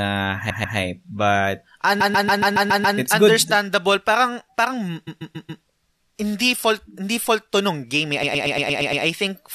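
Repeated frames make the speech stutter at 0.49–0.77, 2.00–2.97, 5.06–5.62 and 8.22–9.03 s. The same compressed chunk, about 0.14 s long (0.12 s in the last one), replays two to seven extra times.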